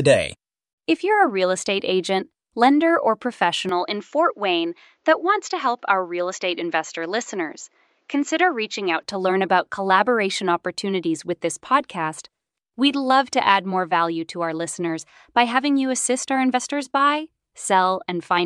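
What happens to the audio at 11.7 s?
At 11.7 s the speech carries on cleanly, with no dropout, click, distortion or other fault to be heard at that moment.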